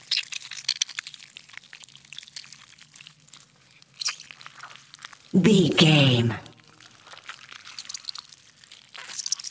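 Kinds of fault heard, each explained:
Skip ahead at 3.11 s: playback jumps forward with no gap, and roughly a third of a second of sound is missing. That stretch was dropped while later audio was already queued, and the two sides are joined almost directly.
Jitter buffer speed-up, 3.19 to 4.42 s and 4.86 to 5.89 s: with more audio queued than intended, the receiver repeatedly cut out short pitch-period slices. The sound runs at 108% and then 105% speed at unchanged pitch and sounds hurried.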